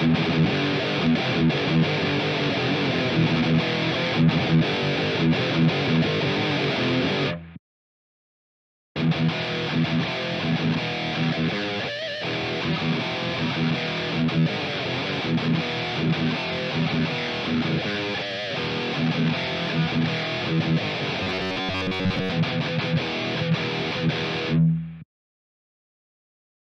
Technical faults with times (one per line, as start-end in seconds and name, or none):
21.23-22.33 robotic sound from repeated short buffers